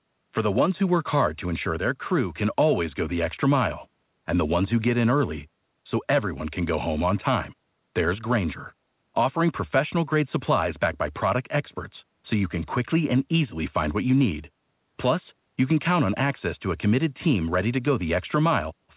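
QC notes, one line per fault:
No faults found: the speech is band-limited at 4 kHz, which fits a G.711 mu-law call path working as intended.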